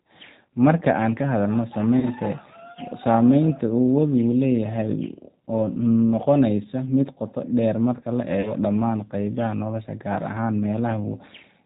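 Throughout the speech, the sound is band-limited with nothing above 4 kHz, and it has a plainly audible rough, slightly synthetic edge. This is the G.729 codec at 8 kbit/s, which rebuilds each short frame from a vocal tract filter, a pitch predictor and a few pulses.

From 2.00 to 2.09 s, and again from 8.41 to 8.54 s, the sound smears into a buzzy tone or coloured noise that fades and stays weak for a moment afterward. This is VoIP packet loss concealed by the speech codec. About 30 ms of audio was missing each time, which fits a single lost packet. The decoder extended its last pitch and filter at falling gain, and its frame-to-frame memory dragged out the recovery.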